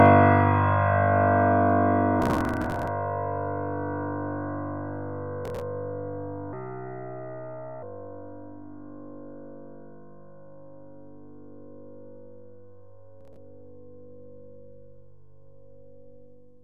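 From 2.2 to 2.88 s, at 5.45 to 5.61 s, and again at 13.21 to 13.36 s, the processor falls behind and skips run after run of short buffers, which fits buffers of around 7 ms. The result is processor overload crackle: gritty, tearing bursts riding on the sound.

Between 6.53 and 7.83 s, a section at the wrong speed plays 1.29 times too fast, likely from being fitted to the wrong clock. Everything in that stretch rises about four semitones and hurries, then drops back to normal pitch and pace.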